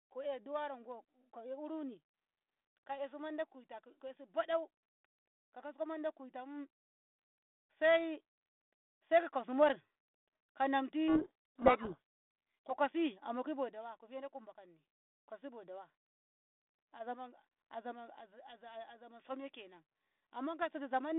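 From 11.08 to 12.76 s, the decoder unpacks each G.726 code word with its bits in reversed order, a codec payload misread. The 32 kbit/s line band, 200 Hz to 3.6 kHz, carries harsh, rasping distortion that buries the speech until the packing matches again.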